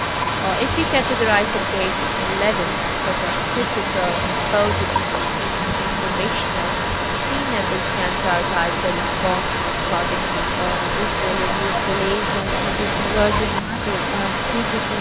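From the start to 13.62 s, a delayed copy of the speech runs under the talker about 248 ms behind, only around 5 dB quieter, so it reads as a strong doubled repeat rather than faint room ambience. This is an echo leak, likely from a far end on loudspeaker whose echo canceller let much of the returned signal through. Like the direct speech, the echo tops out near 4 kHz, which fits a G.711 mu-law call path.

At 13.61 to 13.77 s the speech drops out sharply, by roughly 30 dB for about 150 ms, leaving a brief hole. This is speech suppressed in double talk, likely from the echo canceller attenuating everything when the near and far sides overlapped.

From 13.78 s to the end, the same echo leak returns with the same 248 ms delay and the same high level relative to the speech.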